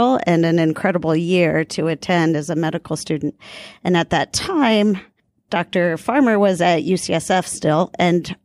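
Speech recording with no audible technical faults anywhere in the signal.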